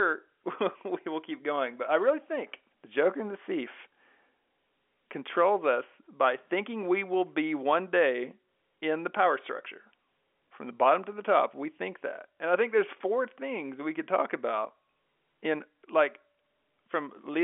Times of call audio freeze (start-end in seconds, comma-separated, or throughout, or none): none